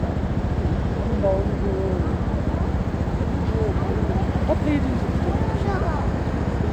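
No technical faults can be heard anywhere in the audio, and the signal stays intact and continuous throughout.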